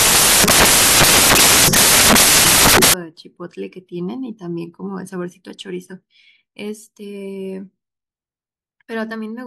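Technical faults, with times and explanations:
0.00 to 2.94 s, samples built from the wrong bytes: each sample is assembled from misaligned or swapped bytes, so the fast-changing low-order bits become the large part of every value. The speech becomes loud, harsh noise, close to white on the louder sounds.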